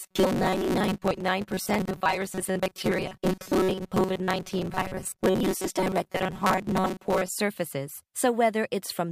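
Audio likely reached the playback side too seldom, so for about half of the stretch the software padded the gaps by replaying a very short buffer of roughly 5 ms while the real audio was skipped. That is robotic sound from repeated short buffers, running from 0.01 to 7.30 s. The constant repetition stamps a fixed 188 Hz buzz onto the speech, making it rigid and metallic while still loosely following the words.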